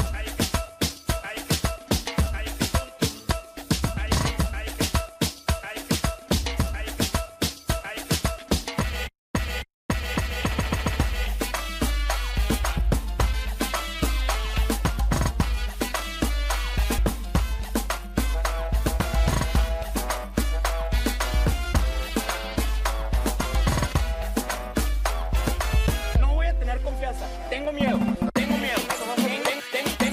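At 16.98 s a small tick and a near-instant dropout of only a couple of milliseconds break the audio, which then carries on from a different point. This is a CD skip: the laser lost its track and jumped to another turn of the spiral.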